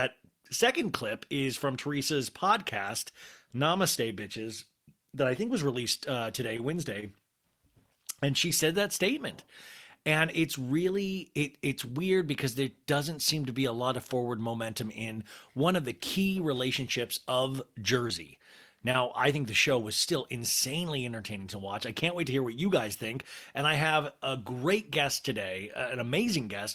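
Scattered short gaps appear from 5.97 to 7.04 s, just after "that I think was". About three lost or late packets, none longer than roughly 20 ms, were patched by extending the preceding sound, leaving ticks and smears. They return from 17.56 to 18.96 s, after "of the key relationships". Here about four patched holes total around 70 ms, and another 20 ms is simply missing, giving brief hiccups. A jitter buffer speed-up follows from 19.14 to 21.45 s, ending before "to watch I can't". The receiver trimmed roughly 40 ms of pitch periods to cut excess buffering, so speech runs at 102% speed with unchanged pitch.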